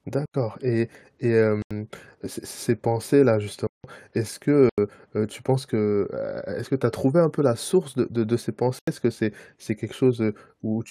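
Blocks of digital silence hit this speech at 0.26, 1.62, 3.67, 4.69 and 8.79 s. Each lasts about 85 ms, the third 170 ms, consistent with 4096-sample blocks left unfilled. The gaps fall before "et et", before "heu heu tu penses", after "de de de ces".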